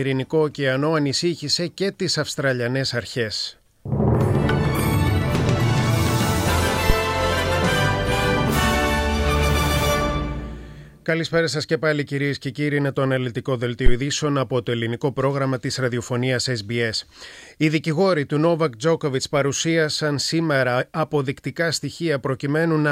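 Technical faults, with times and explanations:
6.90–6.96 s and 13.86–13.93 s, phantom power thump: supply switching on the live input pushes a step through coupling capacitors, giving deep thumps peaking about -3 and -2 dBFS that die within 15 ms.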